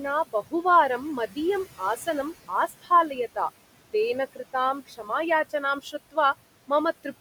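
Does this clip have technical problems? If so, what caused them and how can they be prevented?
Yes. There are noise suppressor artifacts through the whole speech clip. The suppressor is pulling the steady room noise down by about 17 dB. That noise already sits about 17 dB under the voice, so it drops away in the gaps and creeps back under the talking. Going easier on the suppression strength, or dealing with the room noise at the source, would keep this from happening.

There's also speech cut by the noise suppressor in three spots: 0.33 to 0.54 s, 2.68 to 2.91 s, and 4.87 to 5.1 s. In each one the suppressor mistook quiet parts of the speech for noise and turned them down with the background, by about 16, 17 and 14 dB at the deepest point. The affected bits add up to roughly a tenth to a fifth of a second each, and they sound swallowed or faint. A gentler suppressor setting, or moving the mic closer so the speech sits clearly above the noise, should stop it eating into the speech.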